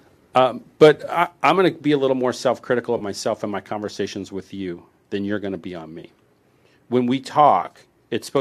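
At 0.81 to 0.88 s the loudest part of the speech crackles harshly. This is microphone overload. The input level was likely set too high, so the peaks ran about 4 dB past the converter's limit. Their tops were sliced flat, on a sizeable share of the samples. It happens again at 1.45 to 1.51 s, just before "going to be a". That one is milder, about 2 dB over, with fewer samples clipped. The edge is briefer and softer.

At 2.98 to 3.03 s, just before "myself in my conversations", there is AAC frame loss with concealment. About 30 ms of audio went missing, which fits three short frames. The decoder patched the gap from the last good spectrum, so the sound smears into a brief noisy, phasey blur. The same thing happens at 6.00 to 6.05 s, right after "going to be on". It is again about 30 ms long and sounds much the same.

From 7.63 to 7.79 s the losses are scattered. About 70 ms in total is missing across a 160 ms stretch. 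Each run is only about 10 ms long. Because the gaps stay so short, the concealment never fades toward silence. Instead the sound turns noisy and phasey for that stretch, with several small smeared patches in close succession.

At 8.37 s the level drops suddenly by about 2 dB. Speech and background both step down together. This is the microphone volume stepped down. The call software likely reacted to the earlier clipping by lowering the device's input volume in a single move. The drop is not a gradual fade. It lands as one clear step, and it comes right at the very end of the clip.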